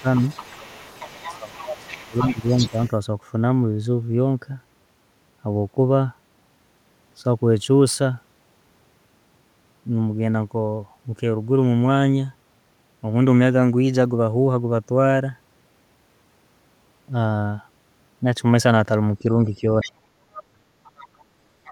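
Speech with a second voice behind it from the start to 2.91 s, about 15 dB below the talker, returning in short scraps at 19.8 s, 20.35 s, 20.84 to 21.22 s and from 21.65 s to the end, about 15 to 25 dB down. This is the other side's voice leaking through, likely loudspeaker playback the echo canceller left behind. The talker also dips at 0.01 to 0.05 s, 1.22 to 2.77 s and 19.22 to 20.67 s, by up to about 15 dB in the first two and about 40 dB in the last. That is speech suppressed in double talk, likely the canceller turning down the near voice along with the echo.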